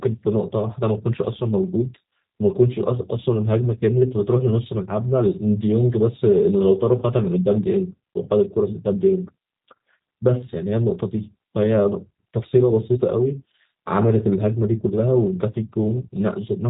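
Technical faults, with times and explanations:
Throughout, G.729 codec: the speech sounds plainly rough and synthetic because each 10 ms frame is rebuilt from a vocal tract filter, a pitch predictor and a few pulses, which fits an 8 kbit/s G.729A link. A spectrogram shows nothing above 3.8 kHz, with smeared, grainy harmonics.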